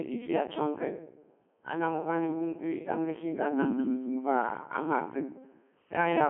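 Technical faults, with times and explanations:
Throughout, Codec 2 vocoder: the speech is rebuilt from pitch, voicing, energy and a coarse spectral envelope at 3.2 kbit/s, so it comes out robotic and buzzy, confined to a 200 Hz to 3.4 kHz line band with nothing above 3.7 kHz. Unlike a waveform codec's smearing, the original waveform is replaced by synthetic harmonics.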